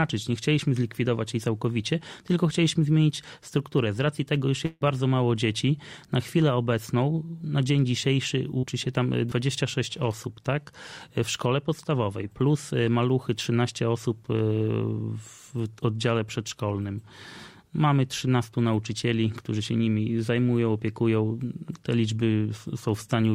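At 4.65 s the audio likely stopped arriving over the network for about 160 ms, which sounds like a long network dropout. The receiver covered most of that gap by stretching the last sound it had into a fading buzz or hiss, lasting roughly 150 ms, before a brief silence of about 10 ms. At 4.83 s the audio resumes, but the stretch that never arrived is simply gone, so the sound jumps forward rather than picking up where it left off.

At 8.59 s about 40 ms of data failed to reach the decoder in time, a short concealed packet loss. The receiver patched the hole by extending the preceding sound for those 40 ms and then blending back into the real signal by 8.65 s. The result is a brief smear or wobble in the sound.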